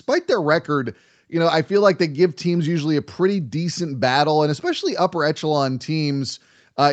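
No technical faults can be heard in the speech. The top end stops at about 8 kHz, consistent with the normal band limit of a WebRTC call path.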